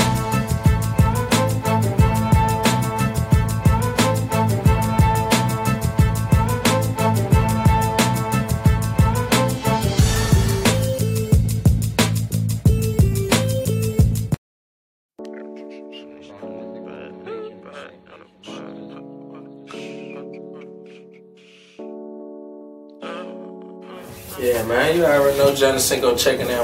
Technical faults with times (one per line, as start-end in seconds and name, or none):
18.53-18.55 repeated frames